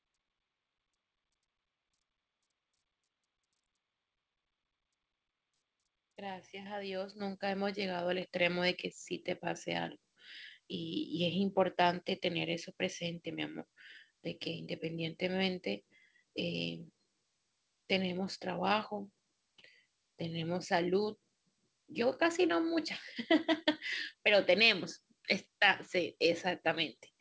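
At 7.2 s the microphone volume is stepped up by about 8 dB. At 8.22 s it steps up again, by about 4 dB. Each time the input gain rises at once. Voice and background jump louder together, without a fade. The audio above 8 kHz is already missing, which fits the G.722 call path.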